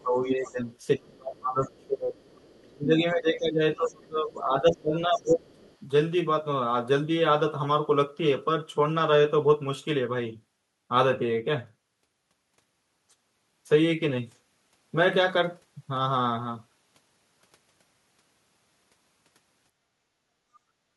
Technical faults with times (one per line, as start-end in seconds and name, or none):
0.02-0.68 speech suppressed in double talk
0.26-0.52 other side's voice leaking through
0.98-2.16 speech suppressed in double talk
1.77-1.86 other side's voice leaking through
2.24-2.62 other side's voice leaking through
2.63-5.45 speech suppressed in double talk
3.85-3.93 other side's voice leaking through
5.52-5.77 other side's voice leaking through